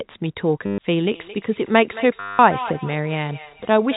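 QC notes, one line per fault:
0.66–0.78 s and 2.2–2.39 s: packet loss with last packet repeated. Gaps of 120 and 190 ms were filled by replaying one short chunk, giving a robotic buzz near 100 Hz, which fits 10 ms packets.
1.15 s to the end: feedback echo between two devices. A second device replays the sound into this microphone, so it returns roughly every fifth of a second, thin and ringing, about 14 dB below the speech.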